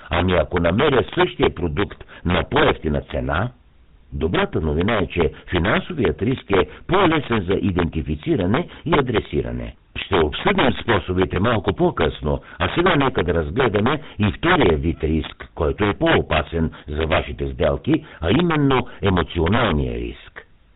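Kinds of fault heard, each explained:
Integer overflow: Loud peaks exceed the integer range by about 8 dB and wrap to the opposite sign instead of being limited. Roughly one percent of samples are affected across the whole clip, producing violent cracks on loud speech that are far harsher than ordinary clipping.
GSM full-rate codec: The speech has been through a vocal-tract model driven by sparse, regularly spaced excitation pulses, which fits the 13 kbps full-rate coder. Nothing above 4 kHz survives, and the voice carries a plainly audible buzzy, gravelly roughness throughout.
Clock slip clicks: Faint regular ticks run from 0.12 s to 20.53 s, about every third of a second, each a single-sample jump. This is likely caused by two unsynchronised clocks; the spacing points to a mismatch of roughly 70 ppm, heard most clearly on sustained voiced sounds.
Lost GSM frames: At 11.34 s and 19.56 s there is a short rough, metallic ring lasting about 20 ms, consistent with a single bad frame each time. 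The decoder repeats the last good frame's settings before normal decoding resumes.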